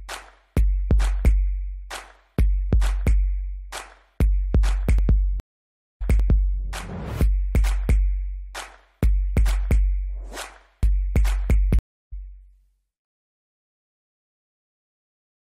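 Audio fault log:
5.40–6.61 s, stream reconnect: the connection drops, leaving about 0.61 s of digital silence. The player then restarts its decoder and resumes about 0.6 s earlier, because the server resends a buffered burst, so a stretch of sound repeats. On the waveform this shows as a flat gap ending in a short ramp as the new decoder fades in. The spectrogram has a blank vertical band, and the patterns just before the gap reappear right after it.
11.79–12.13 s, stream reconnect: a shorter break of about 0.33 s silence. This time playback comes back roughly 0.4 s later, so that stretch is skipped rather than repeated, as with a live stream. The waveform shows a clean empty notch and a soft onset. The spectrogram shows a narrow blank column, with the content on either side not matching up.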